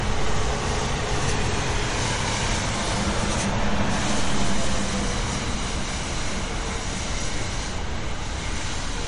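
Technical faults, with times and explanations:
Throughout, MP3 compression: nothing remains above 10.5 kHz, and the audio sounds watery and swirly as weak frequency lines flicker between frames, and attacks smear. Plain low-pass filtering lacks that flicker, which likely comes from MP3 encoding at a bitrate near 40 kbps.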